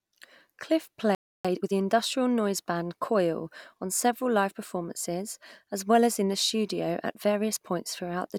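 A speech clip, with a playback stall from 1.15 to 1.45 s. The sound cuts off mid-flow for about 0.3 s, seen as a flat, empty gap in the waveform and a blank vertical band across all frequencies on a spectrogram, likely caused by the player running short of data. Time-compressed catch-up follows from 1.45 to 1.73 s, where speech runs at 2.0 times speed at unchanged pitch. On a spectrogram, harmonics keep their spacing while syllables crowd together and shorten.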